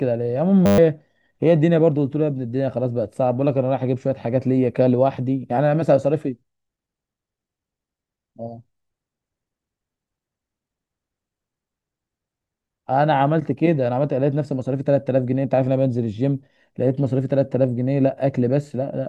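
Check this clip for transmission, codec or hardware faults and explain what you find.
One hardware-level fault is present: a system hang loop from 0.66 to 0.78 s. The computer or audio driver stalled while the output hardware kept replaying its ring buffer, so a single 10 ms slice of the speech repeats 12 times. Because the slice is so short, it is heard as a steady buzz at 100 Hz rather than a stutter, and about a tenth of a second of the original speech is missing.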